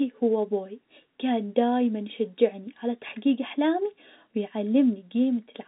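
No faults can be heard in this telephone-band speech.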